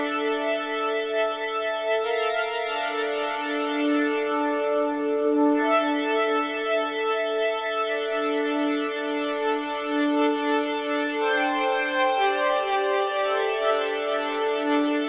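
No faults detected; the audio's band-limiting at 4 kHz is expected narrowband call-codec behaviour, consistent with G.711 mu-law.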